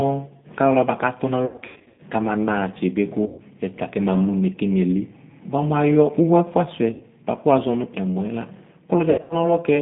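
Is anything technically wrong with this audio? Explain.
Yes, the speech has two problems.

G.729 codec, throughout: the 8 kbit/s coder rebuilds each 10 ms frame from a vocal-tract filter, a pitch predictor and a few pulses. The band is held to roughly 150 Hz to 3.7 kHz, and the voice sounds thin, slightly rough and synthetic.

VoIP packet loss concealed by the speech codec, at 1.46–2.00 s, 3.26–3.40 s, 6.92–7.03 s and 9.10–9.35 s: the decoder filled the gaps by extending its last pitch and filter at falling gain, frame by frame. The voice turns into a fading buzzy or noisy smear and stays weak briefly after each gap, including the scattered 380 ms of loss near 1.5 s.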